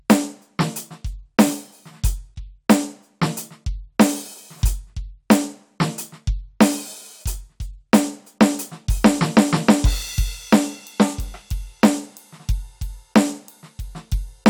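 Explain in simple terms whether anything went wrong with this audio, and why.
Nothing went wrong with this music recording. There are no dropouts, glitches or other technical faults to point to anywhere in it.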